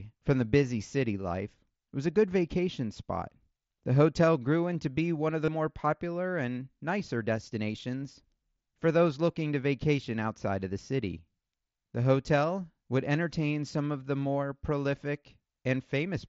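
At 5.45 to 5.48 s, concealed Bluetooth headset packet loss fills a 30 ms gap with a repeated waveform, giving a brief buzzy tone rather than the silent hole of a dropout.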